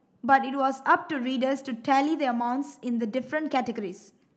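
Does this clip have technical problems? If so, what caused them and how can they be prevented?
No, the speech here has no technical problems.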